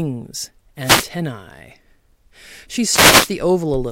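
Wireless microphone noise hits at 0.82–1.07 s and 2.87–3.32 s: FM signal fades raise receiver hiss over the speech, seen as broadband vertical noise bands on a spectrogram.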